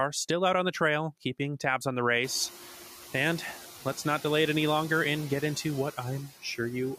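Noise suppressor artifacts run through the whole speech clip. The suppressor estimates which frequency bands hold steady noise and turns them down, frame by frame. Here it takes only about 4 dB off the noise. So the noise dips in the gaps between words and comes back up under them. The room noise jumps by about 24 dB near 2 s. From then on the noise sits about 17 dB below the speech.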